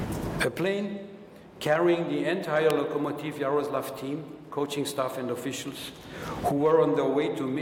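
An electrical switching spike lands at 2.70 s: a single sharp snap, lasting only a millisecond or so, sitting on top of the sound rather than replacing it, and peaking around -10 dBFS. Its abruptness and lack of any tail suggest a brief arc, most likely from a nearby switch, motor or static discharge, coupling into the audio line at that instant.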